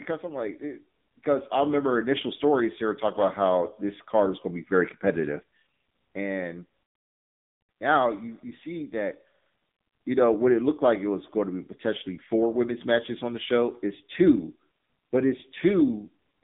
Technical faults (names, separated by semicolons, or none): AMR narrowband mobile codec